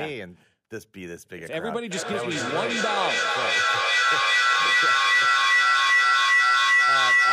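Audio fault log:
1.91 s to the end, feedback howl: sound from one loudspeaker reaches a microphone on the same call and returns louder on each trip, so the repeats build instead of dying away and collapse onto the loop's favoured frequency, around 2 kHz. It peaks about 10 dB above the speech, and the loop's delay is roughly 400 ms. A spectrogram shows a bright horizontal line near 2 kHz, and the waveform envelope swells.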